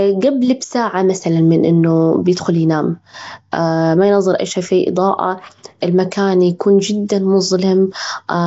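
Speech, rough and hissy throughout with a smeared, underwater quality and nothing above 7.7 kHz. This is likely Nellymoser compression, fitting a 32 kbps stream.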